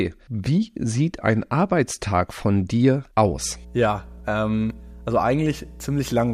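At 3.25 s a mains hum appears and runs to the end of the speech. A steady 60 Hz tone sits under the talker, roughly 20 dB below the speech, likely from a ground loop or nearby transformer leaking power-line current into the signal path. Unlike low-frequency rumble or handling noise, it holds a fixed pitch and constant level, and does not follow the voice.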